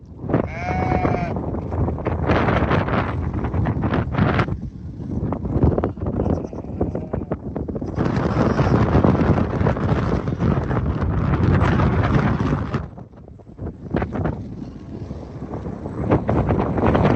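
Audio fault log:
No faults are present: the signal passes through a call path that is working normally, with its content stopping at around 8 kHz, which fits an Opus call stream at 32 kbps.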